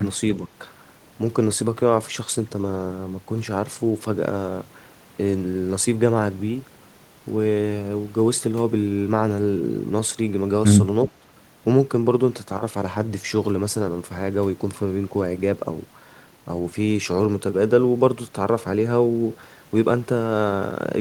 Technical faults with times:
0.37-0.49 speech suppressed in double talk
11.20-11.26 speech suppressed in double talk

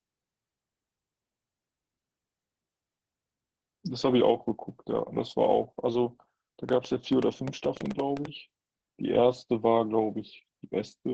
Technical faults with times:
0.00-11.13 Opus voice compression
6.69-8.26 train of clicks

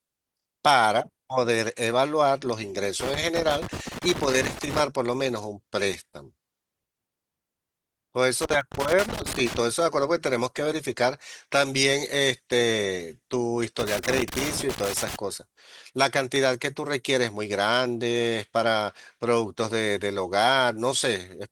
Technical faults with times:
3.00-4.80 loose connector crackle
8.42-9.56 loose connector crackle
8.61 dropped samples
10.66 dropped samples
13.79-15.16 loose connector crackle
16.36 dropped samples

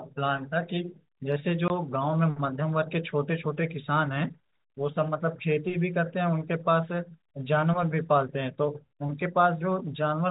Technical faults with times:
1.68-1.70 packet loss filled with silence

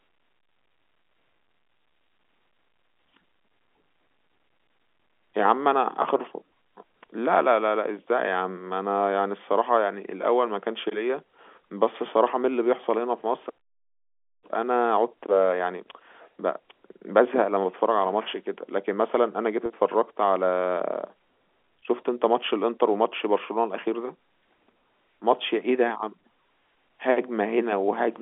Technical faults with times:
6.02-6.04 packet loss with pitch repetition
19.66-19.70 packet loss with pitch repetition

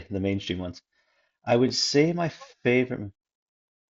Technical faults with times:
1.68 concealed Bluetooth headset packet loss

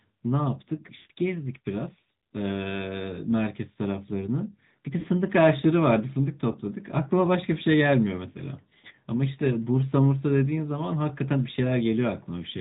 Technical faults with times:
0.00-12.61 AMR narrowband mobile codec
0.96-1.11 lost AMR speech frames
5.00-5.05 lost AMR speech frames
6.52-6.56 lost AMR speech frames

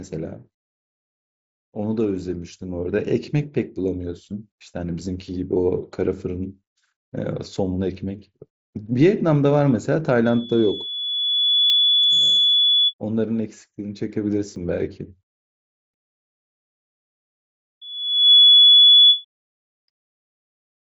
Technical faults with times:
10.25-12.94 loudspeaker feedback squeal
11.70 dropped buffer (overrun)
14.56 dropped buffer (overrun)
17.81-19.25 loudspeaker feedback squeal

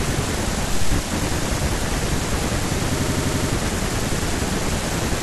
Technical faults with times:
2.99-3.50 system hang loop

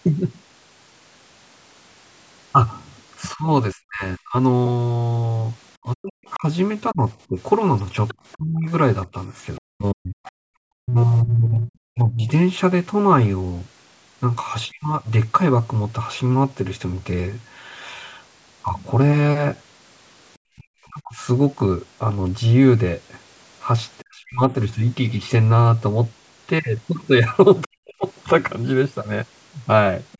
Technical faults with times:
3.33-15.07 speech suppressed in double talk
6.28-8.33 other side's voice leaking through
18.68 bit error spike
20.55-24.41 speech suppressed in double talk
27.66-28.06 speech suppressed in double talk
30.12-30.18 other side's voice leaking through

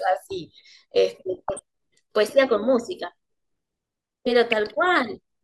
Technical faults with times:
1.34-1.59 DAB burbling
4.52-4.74 DAB burbling

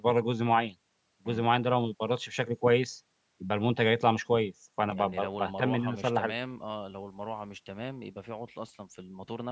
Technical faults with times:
none

